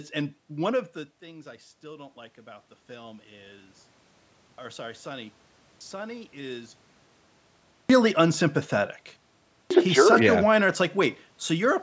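From 1.21 to 3.75 s, after "and one of the", automatic gain rises. The voice has dropped by about 17 dB, so the gain climbs about 5 dB, swelling voice and background together.

Then comes a clipped start after a pause at 4.49 s before "or sorry", 5.72 s, 7.8 s, and 9.61 s before "a he's jerk such". The output device needs time to wake after silence. About 90 ms of each onset is lost.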